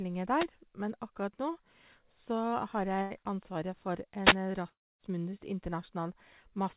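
At 0.34 to 0.49 s and again at 4.21 to 4.37 s, wireless microphone noise hits occur: the analogue FM radio signal fades, so receiver noise rises, heard as a short swish of static.

From 3.02 to 3.13 s, a burst of packet loss occurs. Roughly 90 ms of audio never arrived, and the receiver stretched the last sound for about 82 ms, fading it before the speech resumes further on.

From 4.69 to 5.02 s, audio stops arriving, likely a long network dropout. A fading continuation of the last sound gives way to about a quarter second of near-silence, and the speech resumes with about 0.3 s missing. Throughout, the G.711 call path leaves nothing above 4 kHz.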